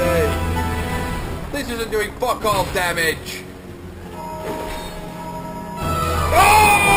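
Throughout the clip the audio carries imaging from sample-and-hold upsampling: it was raised from 12 kHz to 48 kHz by repeating samples without a smoothing filter, so mirrored copies of the spectrum sit above the original band, the first spanning 6 to 12 kHz at about 14 dB below the sound. Unlike steady hiss, this metallic fizz rises and falls with the sound's level, and like aliasing, its lowest copy moves opposite to the pitch.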